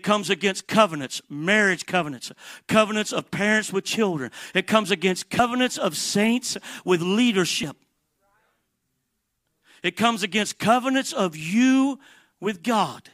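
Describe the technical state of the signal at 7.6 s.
Compressed frames skipped at 7.63 s: about one 32 ms frame of the speech never reaches the output, so the audio jumps ahead by roughly 30 ms.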